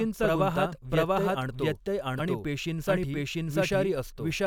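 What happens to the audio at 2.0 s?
At 2.0 s, as throughout the clip, a doubled audio track is audible: a second, equally loud copy of the speech trails about 0.7 s behind, likely from a slower capture path.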